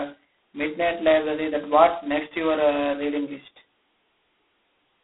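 Speech run through G.726 ADPCM end to end: a harsh, rasping hiss rides the speech level and nothing passes above 3.8 kHz, which fits 16 kbit/s.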